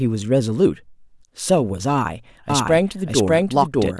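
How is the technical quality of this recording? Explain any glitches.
A doubled audio track mars the recording from 2.50 s to the end. A second, full-band copy of the speech enters abruptly, trailing the original by roughly 0.7 s at about the same loudness, so the two overlap and blur into each other. The likely cause is a second capture path running slower than the first. Unlike an echo or room reverb, the copy has no decay or added room colour.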